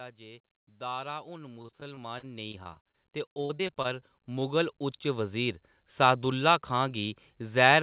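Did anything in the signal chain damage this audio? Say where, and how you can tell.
Yes. In call processing, the automatic gain control kept raising its gain between 0.18 s and 6.04 s, by about 18 dB, so the speech and background swell together steadily.

On the network side, repeated packet loss from 1.62 to 2.95 s and from 3.33 to 4.03 s left gaps of up to about 40 ms. Each was patched by extending the last sound, so the speech turns choppy and robotic.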